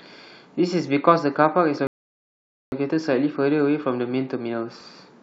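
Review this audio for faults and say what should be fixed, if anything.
A rebuffering stall cuts the speech to silence at 1.87 s, and it picks up again at 2.72 s exactly where it stopped, adding about 0.85 s. Unlike a dropout, nothing is skipped. Prevent it with a larger playback buffer or adaptive bitrate switching.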